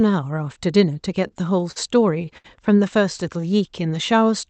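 Short stalls from a late packet occur at 1.27 to 1.32 s, 1.71 to 1.78 s and 2.38 to 2.46 s. Each time, a packet came late and the buffer ran empty. The sound is held for 28, 44 and 68 ms, then continues with nothing lost.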